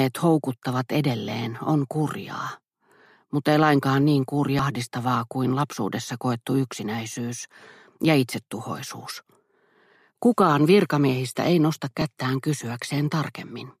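At 4.59 s and again at 12.01 s there is damaged data in the compressed stream: bytes in the encoded file are wrong, so the decoder cannot read the frames at those points and loses its place before locking onto the next valid frame header. Each time this comes through as a very short blip or chirp lasting only about 4 ms and 12 ms respectively, an abrupt, unnatural flick of sound cutting across the audio.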